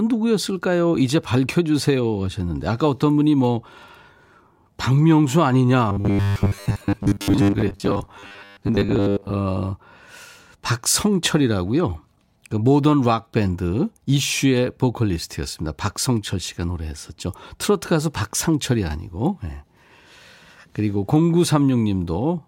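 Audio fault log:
5.89–9.34 s: robotic sound from repeated short buffers. The speech becomes a rigid metallic buzz locked at 100 Hz yet loosely follows the words, likely from a 10 ms chunk replayed through most of the stretch while new audio arrived late. Unlike dropouts, no gaps appear.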